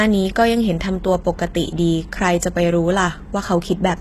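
From start to finish, the speech carries plainly audible HE-AAC compression damage, likely from a low bitrate near 16 kbps. Treble above about 12.3 kHz is absent. Below that, the highs are rebuilt from copied lower bands. Sibilants sound gritty, metallic or lispy.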